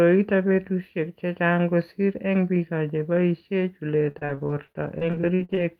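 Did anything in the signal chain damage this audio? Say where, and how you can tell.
Yes, repeated packet loss (robotic sound) at the network stage, from 4.11 to 5.63 s. Thirteen short dropouts, the longest 43 ms, remove about 340 ms of speech. Each is patched by extending the last sound, so roughly 0.4 s turns choppy.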